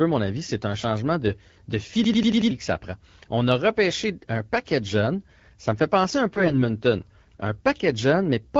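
Speech, carried over the AMR wideband (HD Voice) codec with light coding roughness. From 2.04 to 2.51 s there is a system hang loop. One 93 ms slice repeats five times at about 10.8 Hz, a machine-gun stutter that fits a 4096-sample ring buffer replaying while the system froze. About half a second of audio is lost before "que ça prend". From 6.32 to 6.57 s, just after "me fait penser un", AMR bit errors make the voice hoarse, scratchy and gargly. Pitch and level hold roughly steady. The damage fits a few percent of bits flipped across about a dozen frames. Pulse positions and finer parameters were corrupted while the protected core survived.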